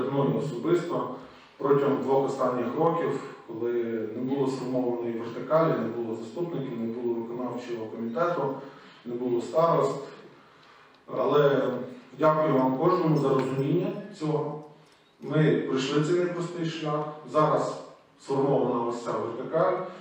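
From 0 to 14 s, the resampler restarted on every block: each 10 ms block went from 48 kHz to 44.1 kHz in isolation, leaving an error at every edge. The result is a 100 Hz buzz that, unlike mains hum, vanishes whenever the sound stops.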